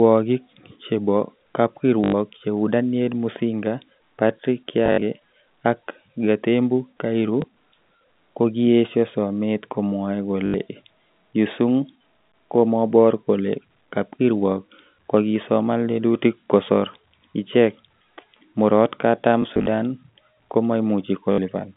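Packet loss with last packet repeated occurs at 2.04–2.14 s, 4.86–5.02 s, 7.42–7.44 s, 10.46–10.54 s just after "kokiyesho somet komwoe", 19.42–19.66 s and 21.32–21.38 s. The receiver fills each gap by replaying the last packet it received. The stutter's length points to 20 ms packets. The repeats seldom line up with the pitch, and runs buzz robotically at about 50 Hz. The gaps at 4.86 s and 19.42 s are broken into scattered short stutters. The G.711 telephone band, 150 Hz to 3.6 kHz, stays audible throughout.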